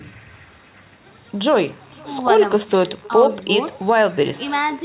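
From the first syllable to the end, the speech carries an echo with no canceller. Every phrase returns about half a second later as a faint, thin copy roughly 24 dB below the direct speech. It is the far end's loudspeaker feeding its own microphone with nothing subtracting it. Room reverberation would smear the sound continuously. This copy instead arrives as a distinct, delayed repeat, and it has the same narrow telephone band, topping out at 4 kHz, as the direct speech.

From 1.53 s to the end, computer activity noise joins in as a low, scratchy buzz pulsing around 70 times a second, about 35 dB below the signal. Processor or graphics load is disturbing the shared ground of the audio circuit. Unlike mains hum, which holds steady at a fixed pitch, this rises and falls with the machine's workload and takes no cue from the speech.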